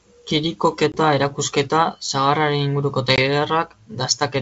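A speech recording carried over a G.722 wideband call suffers packet loss on an ADPCM call twice, at 0.92 to 0.98 s and 3.16 to 3.19 s. Each time, about a single packet's worth of audio, 20 ms, goes missing and is filled with silence, leaving a hard-edged hole. The decoder's adaptive predictor and step size then drift out of step with the sender's, so speech resumes with brief distortion before settling within a few tens of milliseconds.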